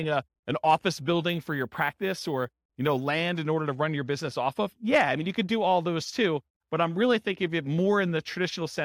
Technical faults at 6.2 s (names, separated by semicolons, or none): none